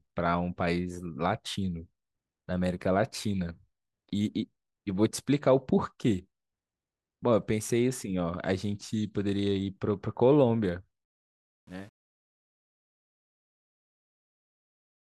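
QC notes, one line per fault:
11.05–15.15 s, truncation distortion on a fade: The speech fades out from about 11 s to 15.2 s. From 11.28 s onward the fade turns gritty and rough. As the level drops, the waveform keeps too few steps and gets no dither, so it collapses into coarse square shapes. The grain fits an 8-bit stage.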